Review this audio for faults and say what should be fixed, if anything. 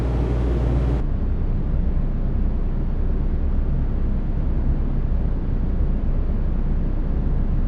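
Stereo read as mono from 1.00 s to the end at 7.67 s: interleaved left and right samples are taken as one channel, so the sound plays at 0.5x speed, 12 semitones (an octave) low, with a mirror image in the upper half of the spectrum. Declare the channel count correctly, or downmix to mono before reading the stream as a single channel.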